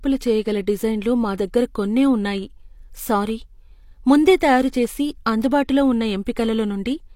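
A speech recording, with a brief smear of hiss at 4.40 s, just ahead of a sharp attack that lands soft instead of crisp. That is pre-echo: a transform codec spread quantisation noise sized for the loud onset across its block, filling the quiet 12 ms before it.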